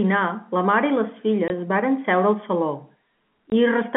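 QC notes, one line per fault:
1.48–1.50 s and 3.50–3.52 s, packet loss filled with silence: two sharp 20 ms gaps with hard edges, each a single lost packet replaced by silence.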